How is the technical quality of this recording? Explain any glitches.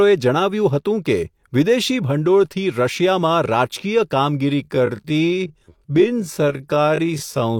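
The speech has one fault, a time-stretched section from 4.6 s to the end. There the pace abruptly slows to about 0.56 times speed while the pitch holds. This is likely software lengthening the audio by repeating short pieces, so the slowed passage drags.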